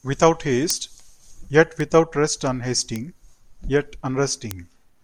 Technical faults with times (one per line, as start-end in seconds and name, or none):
0.70 bit error spike
1.80 bit error spike
2.96 bit error spike
4.51 bit error spike